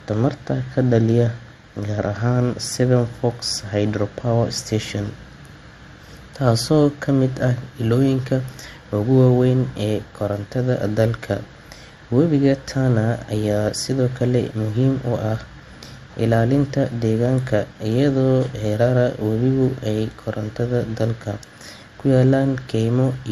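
Throughout the speech there is no content above 13.2 kHz, and two distinct kinds of coding artefact are heard together. This is likely transcoding between lossy codecs, consistent with an MP3 encode near 64 kbit/s later re-encoded to Opus near 48 kbit/s. The second codec spent bits reproducing the first one's artefacts, and the lower cut-off survived the chain.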